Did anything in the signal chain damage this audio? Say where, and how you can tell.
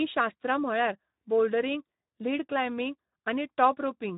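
Yes. Throughout the clip the speech sounds hoarse and noisy, with nothing above 3.8 kHz. That is Speex codec damage: the CELP coder has too few bits for the excitation, which fits a low setting around 11 kbps.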